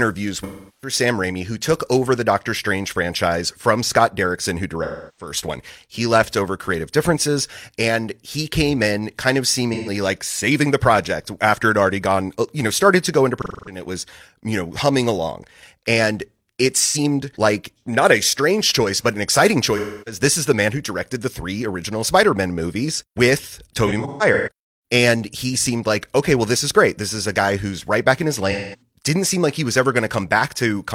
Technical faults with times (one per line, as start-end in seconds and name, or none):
0.40-0.93 AAC frame loss with concealment
4.83-5.32 AAC frame loss with concealment
9.74-9.90 AAC frame loss with concealment
13.38-13.82 AAC frame loss with concealment
16.80-16.97 AAC frame loss with concealment
19.76-20.21 AAC frame loss with concealment
23.86-24.49 AAC frame loss with concealment
28.51-28.81 AAC frame loss with concealment